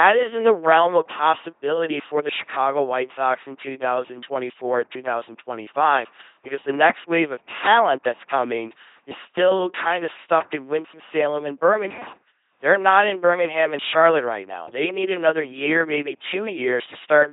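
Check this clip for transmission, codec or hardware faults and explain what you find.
The speech has passed through an LPC-10 vocoder, and the damage is heavy and present throughout. Every frame is excited by either a pulse train or noise through a ten-pole filter, which fits roughly 2.4 kbit/s, so the voice turns buzzy and robotic, with nothing above 3.8 kHz.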